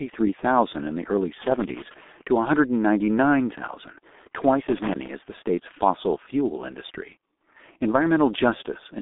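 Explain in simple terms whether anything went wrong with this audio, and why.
Yes, two things went wrong. The speech passed through the G.723.1 codec, an old low-rate phone codec that discards everything above 3.7 kHz, so the voice sounds muffled and hoarse throughout, with blurred consonants. Then, just after "in the early", a loose connector crackle from a bad contact making and breaking chops the signal into scratchy crackling from 1.42 to 1.94 seconds.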